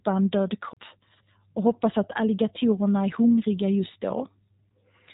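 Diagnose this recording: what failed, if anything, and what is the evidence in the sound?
The speech passed through a G.729 codec at the coding stage, which fits an 8 kbit/s low-rate VoIP coder. It rebuilds the speech from a vocal tract filter, a pitch predictor and a few pulses per frame. Nothing above 3.8 kHz survives, and the coding damage is plainly audible as a rough, synthetic texture throughout.

A CD skip at the playback stage sits between 0.73 and 0.77 s, just after "en död". The laser lost its track and landed on a different turn of the spiral. The player muted for about 30 ms, then resumed from another point on the disc, so the speech jumps abruptly across the gap.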